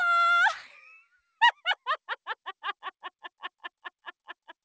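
Sound cut by the noise suppressor, from 1.0 to 1.2 s: the suppressor mistook this stretch for noise and pulled it down by up to about 18 dB for roughly a fifth of a second, so the sound briefly sinks before recovering, all within a band ending at 8 kHz that fits a G.722 call.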